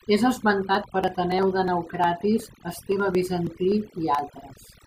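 From start to finish the speech sits over a background of near silence sprinkled with twinkling specks. This is overdone noise removal: an overly aggressive denoiser suppressed frequency bands close to its noise estimate, taking quieter parts of the voice along with the noise.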